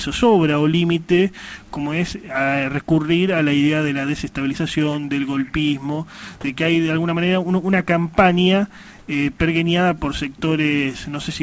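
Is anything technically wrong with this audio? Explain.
Yes. From 8.99 to 9.08 s, a 90 ms stretch of the background, which sits about 32 dB below the loudest parts, turns into a steady, featureless hiss at the same level before the real background returns. This is likely comfort noise in place of the background: the sender stopped transmitting during a pause and the receiver filled it with synthetic noise shaped like the room. Unlike a dropout or a noise gate, there is no silence and no level dip, only texture lost. The call path's G.722 coding, with nothing above 8 kHz, sits underneath throughout.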